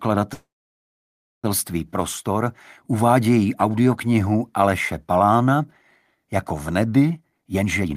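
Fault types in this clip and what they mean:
Call audio freeze: At 0.33 s the sound stops and the gap lasts to 1.46 s, about 1.1 s in all. Most likely the incoming packets stalled and the receiver's buffer ran dry. A brief fading continuation of the last sound gives way to near silence for roughly 0.98 s. Unlike a dropout, nothing is lost: the audio resumes exactly where it broke off, now running about 1.1 s later.
Jitter buffer speed-up: From 7.17 s to the very end at 7.96 s, the audio rushes along at about 142% of its normal rate while the pitch stays put. The receiver is trimming a backlog by cutting out many tiny pitch-period slices, around a third of a second altogether. That unchanged pitch is what separates it from a plain playback-rate error, where everything would also rise in pitch like a sped-up tape.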